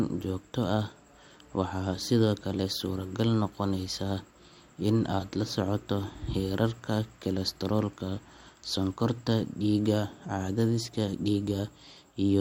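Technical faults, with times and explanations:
No technical faults detected in this speech recording.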